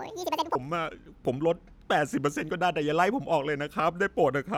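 Audio read two samples at a time (double speed) affects the opening, from 0.0 to 0.55 s. The reader treats each pair of samples as a single frame, so the speech plays twice as fast and a full octave higher, 12 semitones up.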